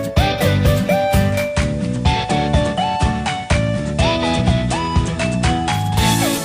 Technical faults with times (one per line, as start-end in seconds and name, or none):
1.25-6.05 digital radio blending to analogue